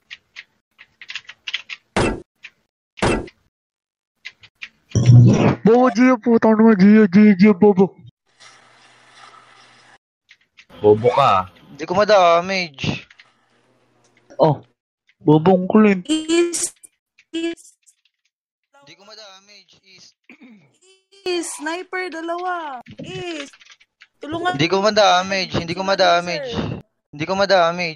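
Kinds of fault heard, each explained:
One channel inverted: from 17.54 to 21.26 s the sound drops by about 28 dB to a faint residue. One stereo channel's polarity is likely reversed, so content shared by both channels cancels in mono. A plain level drop would keep its full tone.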